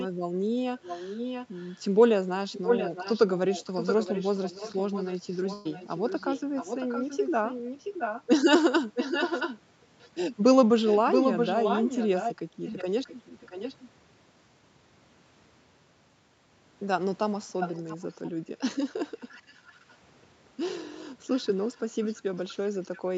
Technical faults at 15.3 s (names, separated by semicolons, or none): none